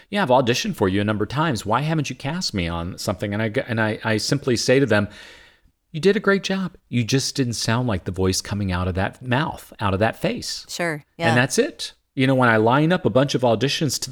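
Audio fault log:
No fault is heard in this speech clip.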